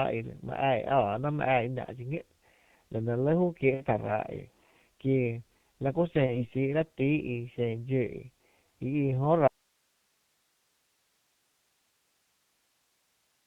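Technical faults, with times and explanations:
Throughout, G.723.1 codec: The speech sounds muffled and hoarse, with nothing carried above 4 kHz, and consonants are blurred. At about 6.3 kbit/s the codec packs speech into 30 ms frames and rebuilds it from a coarse model of the vocal tract that is updated slowly. Fast changes in the voice fall between updates, and the heavy coding damage here leaves the voice muffled and hoarse.
1.86–1.90 s, 3.74–3.85 s and 6.26–6.45 s, VoIP packet loss concealed by the speech codec: At each of these points the voice briefly turns into a stretched, buzzy tone or coloured noise that weakens and then recovers. Audio was missing from the stream, one 30 ms frame at the first and third points and two frames (60 ms) at the second. The decoder filled each gap by repeating its last pitch and filter settings at falling gain. Each frame builds on the one before, so the voice stays thin past the gap, which is why the damage at 6.26 s lasts well beyond 30 ms.
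9.48 s to the end, audio dropout to a faint residue: The speech cuts off abruptly in mid-flow and does not return. Only a steady hiss remains, roughly 45 dB below the speech level. The change is a sudden break, not a pause or a fade, and the hiss shows the path after the break stayed live. The likely cause is the wanted signal being lost upstream while the rest of the chain kept running on its own noise floor.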